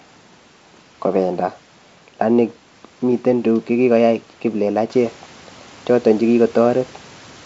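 No technical faults can be heard in the speech.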